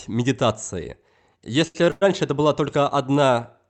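At 1.67 to 1.77 s and again at 1.85 to 1.88 s, the speech hangs on one sound for about 73 ms, then 18 ms, with a faint buzz or dip: a short stall from a late packet, where the emptied jitter buffer stretched the last sound until the packet arrived. From 1.90 to 2.03 s a fading buzz or hiss fills about 110 ms before the speech resumes where it stopped, likely a call audio freeze from held-up packets.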